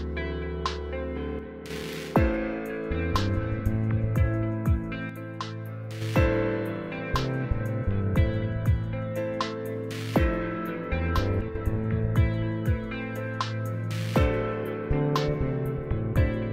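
Three times the audio abruptly drops by about 6 dB and then snaps back: from 1.39 to 1.70 s, from 5.09 to 6.02 s (the longest stretch, close to a second), and from 11.41 to 11.55 s. Nothing else about the sound changes during those dips, only the level, which points to one channel dropping out. That's the likely cause: with both channels carrying the same sound, losing one knocks the mono sum down by that amount.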